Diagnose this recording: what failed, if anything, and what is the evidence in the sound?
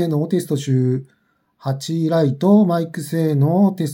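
Nothing failed here: there are no dropouts, glitches, distortion or level jumps to point to, so there's no stage to blame and no evidence of trouble anywhere in the sound.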